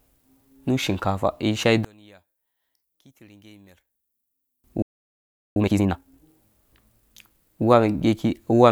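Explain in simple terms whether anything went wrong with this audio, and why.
One channel inverted, from 1.85 to 4.64 s: the speech suddenly drops to a faint trace. One stereo channel has likely been flipped upside down, so when both channels are combined into one, the voice they share cancels itself out.

A playback stall at 4.82 s cuts the sound to silence mid-flow for about three-quarters of a second, until 5.56 s. The player likely ran short of incoming data and had nothing to play until more arrived.

Time-compressed catch-up follows from 5.56 to 6.28 s, where the speech runs at double speed but keeps its normal pitch. The player is clearing its backlog by snipping out small pieces and blending the gaps.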